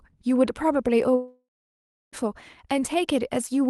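From 1.15 s to 2.15 s the speech breaks off. The last sound smears into a fading buzz, then near silence lasts about 0.66 s, and the speech resumes with roughly a second gone. This is likely a long network dropout concealed by the receiver.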